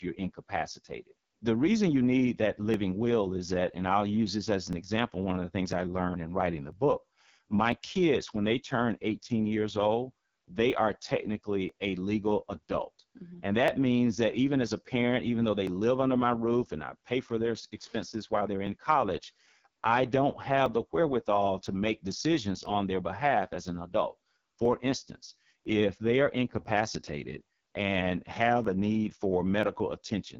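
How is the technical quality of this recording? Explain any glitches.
Technical quality is poor: heavy codec damage runs through the whole recording, and a regular ticking interrupts the speech about once per second.

AMR wideband (HD Voice) codec, throughout. The speech sounds rough and raspy, with nothing above 7.5 kHz, which fits AMR-WB running at its lowest mode, 6.6 kbit/s. At that rate the pulse-driven vocal tract model has too few bits, so the voice comes out coarse and grainy.

Periodic USB or driver dropouts, from 0.75 s to 29.63 s, recurring every 1.00 s, around thirty in all. Each time, a background task stalls the USB bus or audio driver and a few milliseconds of audio are skipped outright, producing an evenly spaced tick or pop during the speech.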